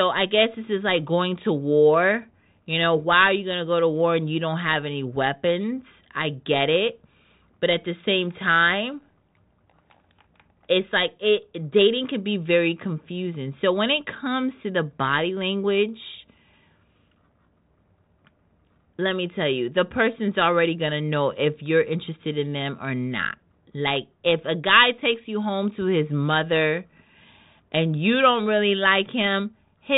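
Nothing technically wrong turns up in this speech recording, so there are no times or causes to point to.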